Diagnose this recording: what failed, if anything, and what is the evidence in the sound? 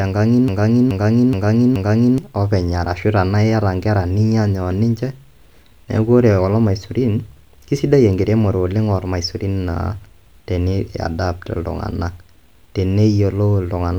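What failed is a broken-record loop, early on. From 0.48 s to 2.18 s the speech stops moving forward and a single 425 ms fragment plays four times back to back, identical each pass, before the clip picks up again at "openy arashu tenaa iyata". That points to the buffer or playback stage: the most likely cause is a player or stream stalling and re-sending the last chunk it held. Whatever should have filled that stretch is simply gone.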